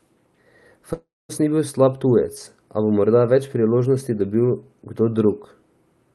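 At 0.93 to 1.31 s the speech smears into a fading buzz, then goes silent, picking up at "ni bil slab tujec" minus a chunk: likely a long network dropout.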